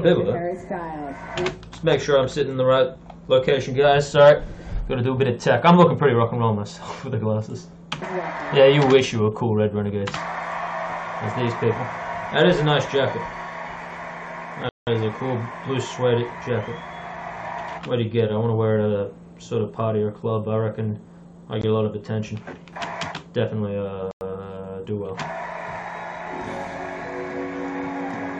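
Three Bluetooth stalls silence the audio: 180 ms at 14.69 s, 19 ms at 21.62 s, and 98 ms at 24.11 s, likely interference starving the headphone buffer.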